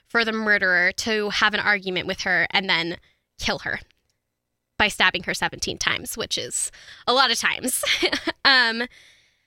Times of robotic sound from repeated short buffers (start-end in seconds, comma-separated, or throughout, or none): none